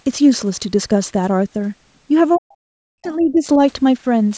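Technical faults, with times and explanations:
2.34 to 2.39 s, other side's voice leaking through: a brief, faint scrap of a second voice appears underneath the talker, far below the main speech at roughly 35 dB down. It is most likely loudspeaker echo: the far end's audio played out of the talker's device reached the microphone, and the echo canceller failed to subtract all of it. The leftover is very short and very quiet, so it registers as a faint fragment.
2.37 to 3.46 s, speech suppressed in double talk: over about a second the talker's speech sinks sharply, at its deepest by roughly 40 dB. This dip starts just as the leaked far-end voice appears, which points to the likely cause. Both sides were sounding together, and the echo canceller, unable to tell the local talker from the echo, turned everything down.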